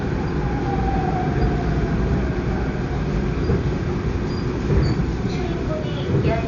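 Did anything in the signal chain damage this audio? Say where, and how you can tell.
Yes. The damage happened at the codec stage, most likely Dolby Digital compression at a starved bitrate. The band stops at 7 kHz for the whole clip, and the damage is heavy throughout, which fits an encoder running at about 48 kbps. With that few bits, it narrowed the bandwidth and left many frequency lines with no detail at all, so the decoder filled them with noise. The sound is dull, and tonal parts carry a rough, fluttering haze.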